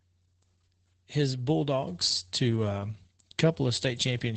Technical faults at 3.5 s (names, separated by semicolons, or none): Opus voice compression